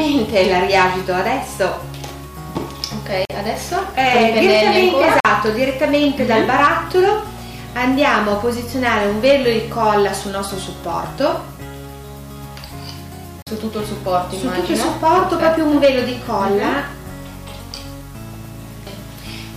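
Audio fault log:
3.25 s, 5.20 s and 13.42 s: block of digital silence. Each time, the output was filled with zeros for about 46 ms, which fits a 2048-sample buffer, either because the program missed a buffer deadline or because a calculation produced invalid values. The sound drops out abruptly, leaving a short hole.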